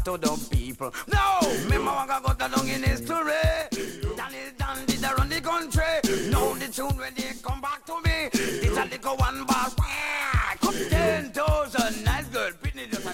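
At 3.62 to 4.68 s, 6.92 to 8.04 s and 12.49 s to the end, the level drops abruptly by about 6 dB, likely one channel dropping out, showing as sudden flat-edged dips in the waveform envelope.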